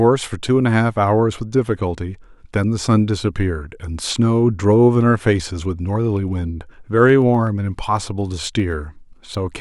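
From 6.47 s to 9.47 s the speech carries periodic USB or driver dropouts. Something stalls the audio path every 0.125 s, eight times a second, and each time a tiny sliver of audio, well under a millisecond, is skipped outright rather than replaced with silence. The result is around thirty ticks. Unlike random clicks or crackle, these keep a strict metronomic spacing, and they vanish in pauses because skipping silence leaves nothing audible.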